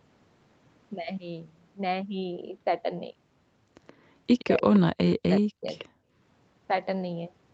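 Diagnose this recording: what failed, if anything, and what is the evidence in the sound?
The far end's echo canceller likely let part of its loudspeaker signal back into its microphone, an echo leak in call processing. A copy of the speech trails by about 124 ms at 3.87–3.94, 4.39–4.79, 5.09–5.16 and 5.78–5.85 s, roughly 15 to 30 dB below the direct speech.

The call processing likely suppressed speech in double talk. Because both sides were active, the canceller could not tell its local talker from echo and pulled the level down. The speech dips by as much as about 40 dB in pieces across 4.44–4.64 and 5.01–5.66 s.

The background was gated by the echo canceller in call processing. While the loudspeaker played, the canceller clamped the microphone hard. The room sound drops by up to about 35 dB for about 200 ms between 5.94 and 6.12 s, then returns when the canceller releases.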